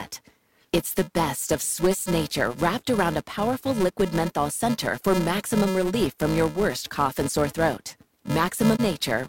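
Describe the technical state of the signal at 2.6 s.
At 2.6 s the speech carries a wireless microphone noise hit lasting from 2.57 to 2.63 s, just before "around a powerful liquid". The FM radio link faded as reflected paths cancelled, so receiver noise surged, producing a short swish of static. On a spectrogram it appears as a brief broadband smear across the whole frequency range. The waveform shows a patch of noisy, irregular samples.

Under that, and throughout, the filter restarted on every block. Each block begins from a zeroed state with a small transient, spaced in a way that fits a 128-sample buffer. This yields a 375 Hz buzz whose loudness tracks the speech level. On a spectrogram it shows as evenly spaced vertical striations and a harmonic comb at multiples of 375 Hz. The waveform reveals tiny periodic discontinuities at every block boundary, larger where the speech is louder.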